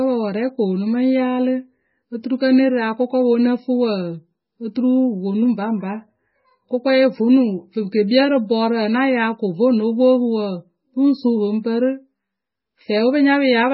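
From start to finish the speech has that watery, swirly quality you get from heavy MP3 compression, which is likely the cause here. Nothing comes through above about 5.6 kHz, so the top end sounds dull. The damage is strong enough to fit a very low rate, around 16 kbps, where the encoder starves the quieter frequency lines and lets them flicker on and off between frames. That's what gives the s sounds their metallic, chirpy edge and blurs the consonant attacks.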